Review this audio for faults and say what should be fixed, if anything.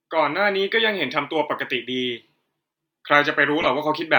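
At 3.61 to 3.66 s, a corrupt frame decoded produces a short artifact peaking at about -10 dBFS, lasting roughly two frames. Flipped bits misplaced energy in frequency, so unlike a lost, concealed frame, the sound bursts outward rather than fading or smearing. Checking each frame's integrity and concealing damaged frames instead of decoding them would prevent this.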